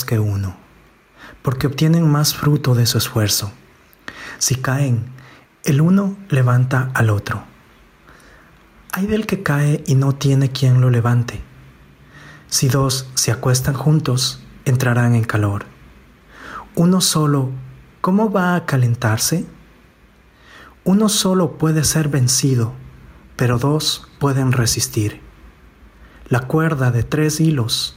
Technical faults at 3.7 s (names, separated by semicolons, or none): gain pumping